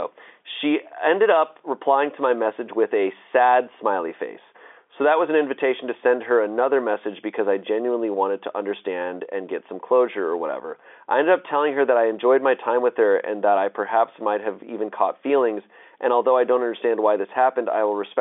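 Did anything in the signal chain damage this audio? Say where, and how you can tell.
No, nothing in the chain damaged this speech; it's just carrying the usual G.711 telephone coding, with the sound sitting in the ordinary phone band and nothing above about 3.7 kHz, which points to a standard mu-law line.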